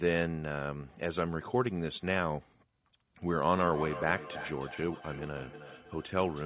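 Feedback echo between two devices runs from 3.46 s to the end of the clip at 6.46 s. A second device in the same room is playing the call back, and this microphone picks that playback up again. The local echo canceller only removes its own device's output, so the sound returns roughly every third of a second. The repeats reach about 11 dB below the speech, thin and ringing, and are band-limited like everything else here to nothing above 4 kHz.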